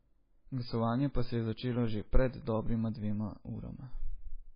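The speech was likely squeezed through MP3 compression at a very low bitrate, with heavy codec damage throughout, and the sound fits something around 16 kbps. Starved of bits, the encoder dropped the treble entirely, leaving nothing above 5 kHz, so the speech sounds dull and boxed-in. Its weaker frequency lines were zeroed and restored frame by frame, giving a watery, swirling texture, with s sounds turning metallic and chirpy and sharp onsets smeared.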